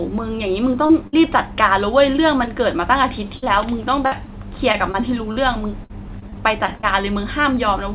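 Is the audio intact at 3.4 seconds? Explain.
No. A burst of packet loss from 3.37 to 3.44 s drops about 60 ms; the receiver extends and fades the last sound, leaving a held buzz if it was voiced or a fading hiss if not, before the audio resumes.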